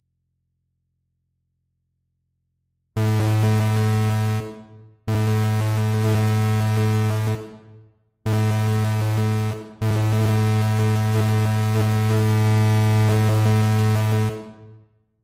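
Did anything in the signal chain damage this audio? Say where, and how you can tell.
No, nothing in the chain seems to have hurt these sounds, and I can't point to any stage that left a mark on them.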